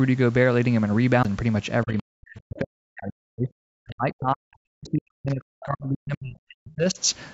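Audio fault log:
1.23 s, CD skip: a tick and a brief mute of about 15 ms, then the sound resumes from another point, as when the laser jumps a track turn. The waveform shows a short gap with a discontinuity, and the spectrogram a thin vertical broadband line.
1.85 to 6.99 s, speech suppressed in double talk: the speech dips, thins and drops out in pieces for about five seconds, falling by roughly 40 dB at its deepest. The likely cause is an echo canceller turning both sides down at once. The waveform envelope shows ragged, sunken stretches, and the spectrogram shows faded, gappy energy, with the top edge already ending at 8 kHz from the call processing.
3.90 to 3.95 s, other side's voice leaking through: a faint scrap of a second voice about 35 dB below the speech, likely echo the canceller left in the microphone signal. It appears as a brief, weak smudge of harmonic energy on the spectrogram, barely visible in the waveform.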